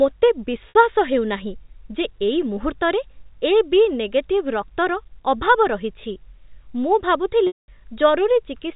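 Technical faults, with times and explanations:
0.69–0.75 s and 7.47–7.68 s, packet loss with pitch repetition: the 60 ms gap before "ହେଉନାହିଁ ଯେ ଏଇ ମୁହୂର୍ତ୍ତରେ" is bridged by repeating the last pitch period, heard as a brief buzzy hold. The 210 ms gap outlasts the roughly 50 ms fade, so it drops to silence before speech cross-fades back.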